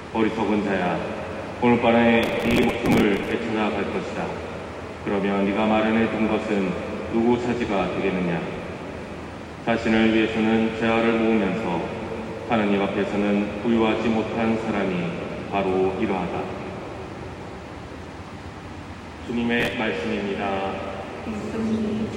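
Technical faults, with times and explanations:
2.23 to 3.31 s, processor overload crackle: a gritty tearing over the sound. The processor misses many short deadlines in a row, which points to buffers of about 5 ms, and each miss replays old audio with hard edges.
19.60 to 19.73 s, processor overload crackle: a brief burst of the same texture, about ten missed buffers. Unlike a single dropout click, it is a dense cluster that stops once the load passes.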